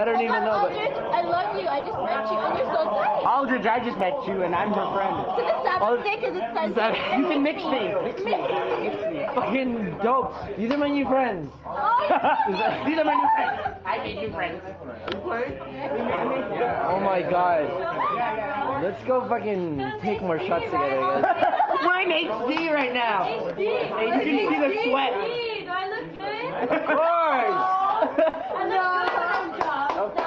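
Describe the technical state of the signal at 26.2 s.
Right around 26.15 to 26.21 s there's a short concealed packet loss: about 40 ms of the call never reached the decoder in time, so the receiver papered over the gap by extending the last bit of sound it had and then easing back into the real stream. You hear it as a quick smear or wobble. It's riding on an Opus call path, band-limited to around 12 kHz.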